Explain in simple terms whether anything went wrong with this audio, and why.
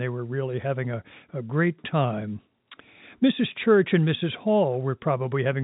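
Nothing went wrong: the speech passes through ordinary G.711 telephone coding, which keeps nothing above 3.8 kHz, so the narrow, phone-like sound is expected.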